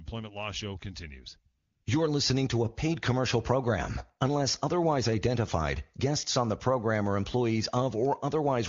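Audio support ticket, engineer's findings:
Comfort noise, 1.57 to 1.85 s: real background drops out for about 280 ms, replaced by a smooth, steady hiss that switches in and out at the edges. AMR comfort noise: the handset's voice activity detection called a pause, stopped sending speech frames, and the far end filled the gap with synthetic noise built from a rough level and spectrum estimate. Room sound in that stretch gets swapped out. Wideband path around it sounds clean, consistent with a high-rate HD Voice link.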